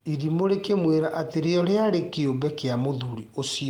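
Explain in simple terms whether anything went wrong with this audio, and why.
Nothing went wrong here: the speech holds steady throughout, with no audible fault at any point.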